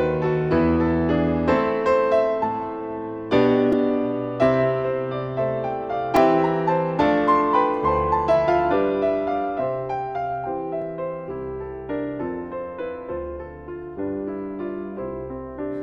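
Repeated buffer clicks at 3.72, 6.16 and 10.82 s: late audio made a 2.9 ms block, fitting 128 samples, replay, showing identical waveform segments and thin vertical spectrogram lines.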